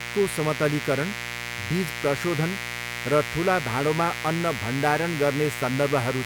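A 60 Hz mains buzz runs under this speech clip from start to finish. Switching spikes, probably from a dimmer, a rectifier or an unshielded cable, enter twice each cycle and scatter harmonics up into the kilohertz range, leaving a steady, raspy buzz roughly 10 dB below the speech.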